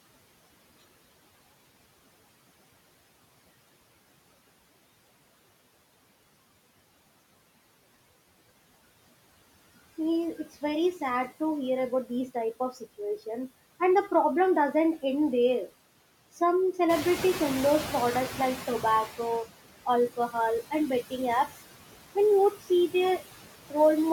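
From the start, noise suppressor artifacts run through the speech. The suppressor pulls down, frame by frame, whichever bands it judges to be steady noise, cutting the room's background by about 17 dB. On a spectrogram the noise floor between phrases shows as a dark, blotchy texture with isolated bright specks, while under the speech it fills back in around the harmonics.

At 16.89 s comes the noise suppressor catching up. The room noise jumps by about 12 dB, rising to sit roughly 11 dB below the speech. The suppressor's noise estimate trails the jump, so the louder noise first comes through with only about 12 dB of reduction and then sinks as the estimate adapts over 2.5 s, settling by 19.4 s. A spectrogram shows a brighter band of noise that fades gradually. In the waveform, the floor between phrases steps up and then tapers back down.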